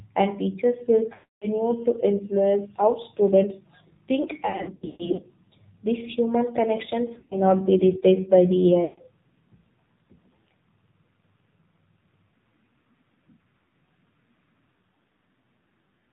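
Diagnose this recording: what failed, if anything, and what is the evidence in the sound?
The failure is at the codec stage: AMR narrowband mobile codec. The whole speech clip has been through AMR-NB at 7.4 kbps, and the damage is plainly audible as a buzzy, synthetic voice built from a vocal-tract model and a few excitation pulses per subframe. Nothing passes above 4 kHz, so a spectrogram shows a hard ceiling there with empty space above, and harmonics that look smeared and quantised rather than clean.

The network stage also failed: lost AMR speech frames. After "and teachers will", 1.14 to 1.48 s loses a solid 280 ms. The sound stretches and fades toward silence as the decoder repeats the last pitch and vocal-tract settings at falling gain. After "how students think", 4.46 to 5.26 s has scattered losses, with the longest run 140 ms. Just before "be replaced by", 7.14 to 7.40 s has short dropouts. 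Further losses occur at 8.84 to 9.02 s and 13.66 to 13.72 s. On a waveform these show as decaying, repetitive envelopes.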